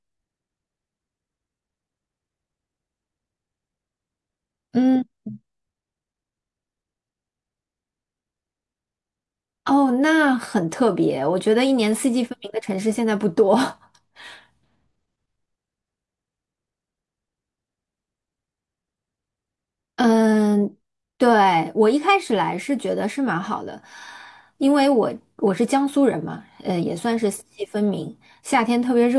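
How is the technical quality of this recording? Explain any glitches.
Nothing here calls for an explanation, since no glitches turn up anywhere in the recording.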